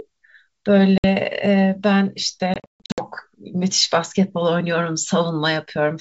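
At 0.98 s, packet loss on an ADPCM call cuts a 60 ms silent hole, a few packets. From 2.54 to 3.02 s, about 320 ms goes missing in gaps across 440 ms, longest 140 ms. Each restart finds the decoder's predictor and step size mismatched, giving slightly distorted speech that settles within tens of milliseconds.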